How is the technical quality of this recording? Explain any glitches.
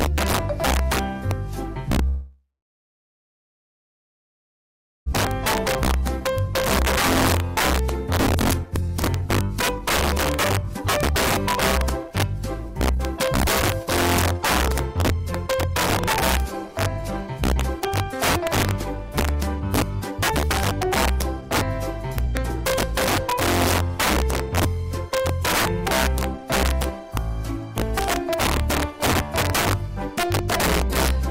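The recording has clear technical problems: harsh overflow cracks on loud passages, a gap of several seconds early on, and stretches that run noticeably fast.

Integer overflow affects the whole clip. Loud peaks, driven about 8 dB past the limit, wrap to the opposite sign instead of clipping. Roughly 4 percent of samples do this, producing violent cracks. On a waveform, peaks jump rail to rail; a spectrogram shows broadband vertical streaks.

From 2.07 to 5.14 s, the sound decays into a fading buzz and then falls silent for about 2.6 s. It resumes with about 1.6 s lost, which points to a likely long network dropout. A spectrogram shows smeared tonal tails and then an empty band.

Jitter buffer speed-up follows as the receiver trims the backlog by about 1.2 s, cutting out short pitch-period slices. This happens at 5.64 to 6.49 s (107 percent), 7.39 to 11.15 s (112 percent), 12.03 to 21.42 s (109 percent) and 22.27 to 24.61 s (102 percent). 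Pitch stays the same, but the first three stretches feel hurried. Events appear compressed in time, and a spectrogram shows no frequency shift.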